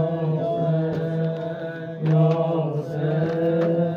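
No technical faults can be heard anywhere in the audio, and the signal stays intact and steady throughout.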